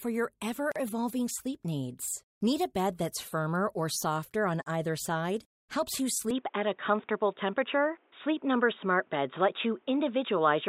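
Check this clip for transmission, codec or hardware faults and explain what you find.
Two faults show up in this speech clip.

At 0.72 s there's a gap at a join of encoded pieces: a 39 ms silence cuts into continuous speech with smeared edges. Separately encoded segments were joined without trimming encoder delay and padding, so the speech simply resumes where it left off.

From 6.31 s to the end, the input likely switched to a poorer device. With no silent gap, the sound goes dull and boxy, nothing above 3.8 kHz, the level shifts by around 5 dB, and a new noise floor sits roughly 40 dB below the speech.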